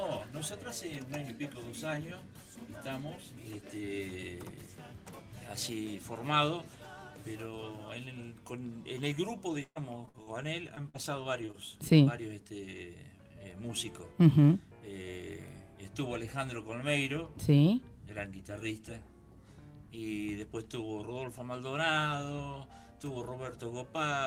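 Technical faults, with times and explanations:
9.63–10.29 s: repeated packet loss (robotic sound). About a third of the stretch is patched by extending preceding sound across gaps up to 120 ms, giving a choppy texture.
10.67–11.55 s: repeated packet loss (robotic sound). Shorter gaps, none over 47 ms, are filled by continuing the last sound, leaving brief choppy breaks across about a tenth of the span.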